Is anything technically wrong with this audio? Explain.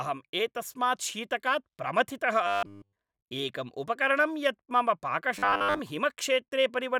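Yes. Audio likely arriving too seldom, with the last 10 ms looped, makes robotic sound from repeated short buffers: a rigid 100 Hz buzz, wholly from 2.47 to 2.96 s after "एतस्मात् शीतकात् प्रमथितः", mostly from 5.39 to 5.80 s.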